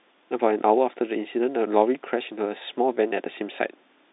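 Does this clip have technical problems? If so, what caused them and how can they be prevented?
No, there are no technical problems to report in this speech. It is carried over G.711 telephone coding, so the sound sits in a narrow line band of roughly 250 Hz to 3.7 kHz with nothing above about 3.8 kHz, which is simply how a fixed-line telephone channel sounds.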